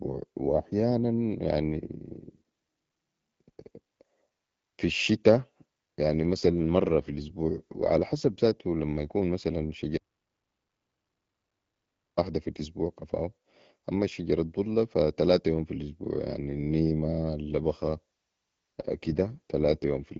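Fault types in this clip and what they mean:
AMR rate drop: This happens twice. The speech stays just as wide but suddenly gets rougher and more synthetic, first from 6.02 to 8.36 s, right after "في الشتاء", then from 17.52 s to the end, after "في الأسبوع يعني النيمه". That's the network telling the AMR-WB codec to spend fewer bits on the sound and more on error protection over a weak link. It fits a step down from 12.65 to 8.85 kbit/s.
audio dropout to silence: Right after "زاتو لما يكون مثلاً" the sound cuts out completely at 9.98 s and comes back at 12.17 s with "في الأسبوع كفاو". That's about 2.2 s of silence with no room tone at all, and whatever was said in between is gone. The likely cause is the input dropping, from a disconnected device or a failed link, while recording carried on writing silence.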